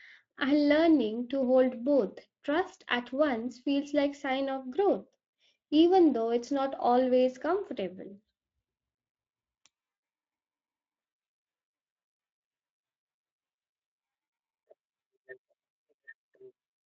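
No technical faults can be heard anywhere in this recording.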